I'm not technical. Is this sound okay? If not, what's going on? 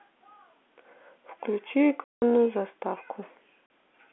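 No, there are two gaps in the speech where the sound drops out completely. The first runs from about 2.05 to 2.22 seconds, close to a fifth of a second, and a shorter one comes at 3.66 to 3.70 seconds. This is packet loss filled with silence: pieces of the audio went missing on the way, and the receiving end played nothing in their place. The gap lengths fit 20 ms packets, and each hole starts and stops abruptly.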